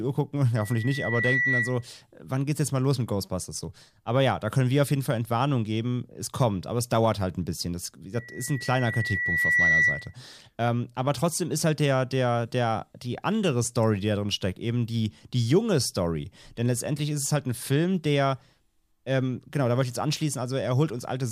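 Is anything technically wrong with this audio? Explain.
Yes. Loudspeaker feedback squeal occurs at 0.55 to 1.87 s, just before "wann geht's jetzt mal", and again at 8.14 to 10.14 s. The microphone re-captures its own loudspeaker, and the loop gain at 2 kHz exceeds one. A pure tone swells to a few decibels above the speech, within a second the first time and over about a second and a half the second.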